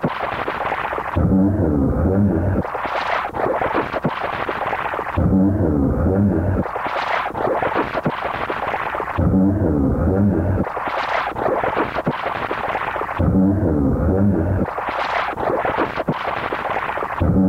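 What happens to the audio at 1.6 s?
At 1.6 s the audio has an error that follows the sound itself, heard as grainy distortion on quiet sounds or as near-steady hiss where the audio is dense. This is low bit depth without dither, present throughout the clip and likely from rounding to about 9 bits, which leaves an error roughly 40 dB below the signal. Unlike dithered hiss, the grit follows the signal rather than sitting underneath it as a steady noise floor.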